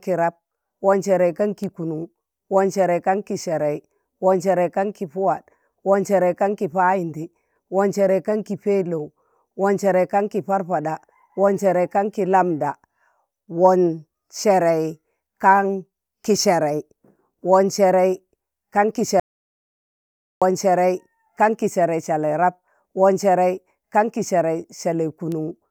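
An audio dropout to silence runs from 19.20 to 20.42 s in this speech recording, about 1.2 s of silence with no room tone. The likely cause is a momentary loss of input while recording continued writing silence, so that stretch of speech is lost.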